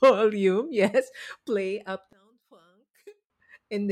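A speech recording in which, from 2.13 to 3.3 s, the level falls by about 26 dB and the sound turns faint. The likely cause is one channel inverted: with one side's polarity reversed, the material common to both sides cancels when they are summed to mono. On a waveform that stretch shrinks to a thin sliver; on a spectrogram the whole band goes dark, leaving only weak traces.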